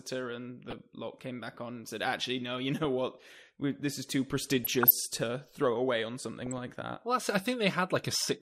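Speech clip with DAB burbling at 0.68–0.80 s, 2.84 s, 4.64–4.93 s and 6.39–6.58 s: short noise blips where uncorrected bit errors from a weak signal (a few tenths of a percent at most) corrupt the MP2 audio data, putting noise into single sub-bands.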